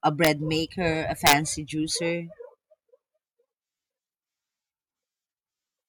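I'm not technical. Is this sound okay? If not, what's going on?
No, there are two sharp cracks, at 0.25 to 0.27 seconds and 1.27 to 1.33 seconds. That's integer overflow: on loud bits of speech, the level ran past what the numbers can hold and flipped to the opposite extreme, giving a violent snap rather than a fuzzy distortion.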